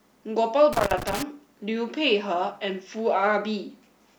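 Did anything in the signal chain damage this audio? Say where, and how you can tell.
Yes. Between 0.73 and 1.23 s there is loose connector crackle in the analogue wiring. A worn or dirty contact is making and breaking, chopping the speech into an irregular burst of scratching. The waveform shows ragged gaps and spikes, and the spectrogram shows scattered broadband vertical streaks.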